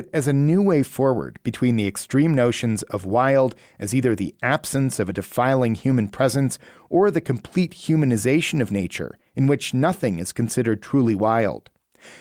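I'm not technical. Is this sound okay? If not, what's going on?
Yes, nothing wrong can be heard in this recording.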